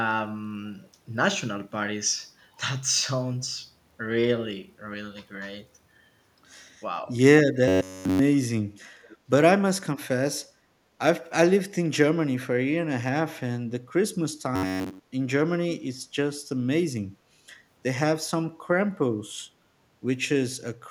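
From 7.68 to 8.21 s and again from 14.56 to 15.1 s, the speech turns into a rigid metallic buzz at 93.8 Hz, robotic sound likely from repeated short buffers of about 10.7 ms. The first stretch is entirely repeats, the second mostly. Between them, from 9.03 to 9.17 s, a faint echo leak appears: a copy delayed by 503 ms, roughly 30 dB below the speech, likely an echo canceller failing to remove loudspeaker pickup.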